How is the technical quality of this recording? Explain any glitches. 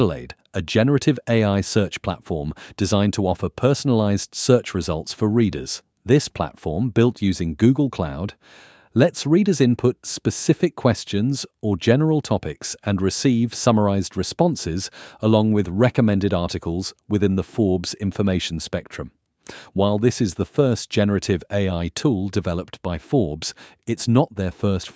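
No glitches are audible; the speech shows only the expected marks of call microphone processing, with the lowest bass rolled off and no content above 8 kHz.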